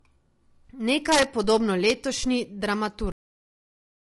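Speech runs all the way through with a rough, grainy coding sound: noise creeping in between the harmonics and a thin and somewhat synthetic top end. That's plainly audible low-delay AAC compression, likely AAC-ELD at something around 32 kbps. Its short frames can't resolve harmonics finely and burn extra bits doing it, so at this rate the damage shows. On top of that there are two brief smeared, phasey patches, at 0.65 to 0.68 s and again at 2.21 to 2.24 s. Those are AAC frame loss with concealment: roughly 20 ms of audio went missing each time, and the decoder papered over the gap by reusing the last good spectrum. The gaps are short enough that you hear a noisy blur rather than a dropout. Nastier are the integer overflow cracks. From 1.12 to 1.50 s the loudest peaks run about 2 dB past full scale, and instead of clipping flat they wrap around to the opposite extreme, so you get violent, spiky cracks far harsher than ordinary distortion. 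There's one more isolated crack at 1.90 s where a peak pushes only about 1 dB over. Finally, the audio simply stops at 3.12 s, mid-sound, dropping straight into digital silence with no decay. That's a cut-off end: the last buffers never got written or played out.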